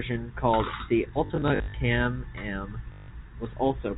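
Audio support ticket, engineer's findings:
Robotic stutter with a low buzz, 1.26 to 1.74 s, just after "called the". About 240 ms of sound lost, scattered in runs of up to 60 ms. Second, shorter stutter at 2.92 to 3.08 s, about 160 ms lost. Probable component: receiver jitter buffer or loss concealment. Mechanism: packet loss with last packet repeated. Lost packets are filled by replaying the previous one, and the repeats are seldom aligned to pitch. The buzz sits near 50 Hz, which fits 20 ms packets. The G.711 telephone path is band-limited to 4 kHz.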